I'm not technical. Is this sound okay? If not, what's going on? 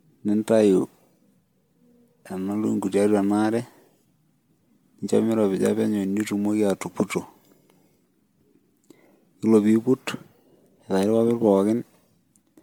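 No, the speech sounds swirly, smeared and a bit hollow the whole way through, with softened starts to sounds. That's generation loss, likely from being saved as an MP3 again and again, maybe seven times, each pass adding a little more damage.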